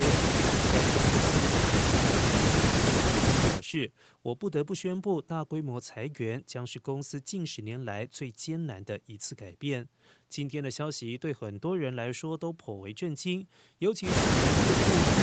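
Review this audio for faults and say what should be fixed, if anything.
Nothing needs to be fixed, as the review of this audio finds no faults.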